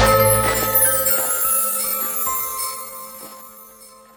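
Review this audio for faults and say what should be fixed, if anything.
From 1.17 s to the end, a time-stretched section slows the sound to 0.62 speed. Pitch holds, but pace drops abruptly. Likely caused by software stretching to fit a length. Avoid by re-editing or resampling instead of stretching.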